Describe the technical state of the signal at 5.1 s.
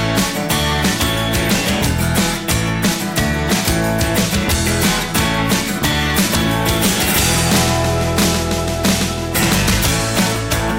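At 5.1 s the signal is hard clipped, as it is across the whole clip. It is driven about 14 dB past the limit, so around a tenth of the samples are cut flat. Those flat tops add high harmonics, heard as harsh fuzz on loud sound.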